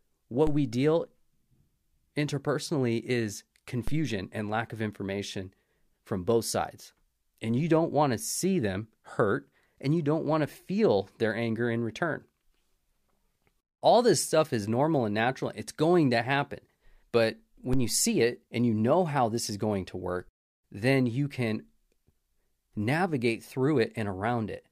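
Three DC steps turn up in this speech clip: at 0.47 s just before "we deal", at 3.88 s between "interpersonally is" and "and lack of information", and at 17.73 s right before "you see it and". Each time the waveform's zero line jumps, by about -21 dBFS for the first two and about -19 dBFS for the last, then drifts back as a 2 Hz high-pass bleeds the offset away. You hear a low thump while the speech carries on unchanged.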